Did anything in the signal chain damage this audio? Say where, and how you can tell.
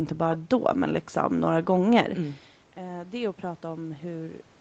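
Yes. After "men liksom några gånger", from 2.16 s onward, the speech and room noise swell together. This is automatic gain rising in the call processing, slowly boosting gain after the talker's level dropped about 16 dB.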